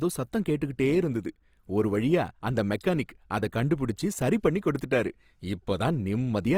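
Opus compression, throughout: the speech turns rough and grainy, likely because bit-starved bands are refilled with folded or noisy content, fitting 24 kbps CELT coding.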